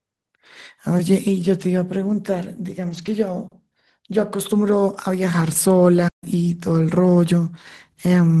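From 2.85 to 3.11 s, several separate lost packets are rebuilt from error correction: the Opus decoder played the low-bitrate copies carried in the following packets, so about 140 ms of speech comes through rougher and noisier rather than dropping out.

At 6.08 s, a playback stall, likely from the player running out of data or its thread being blocked, cuts the output to silence for about 140 ms, until 6.24 s. The speech stops abruptly mid-flow, then resumes.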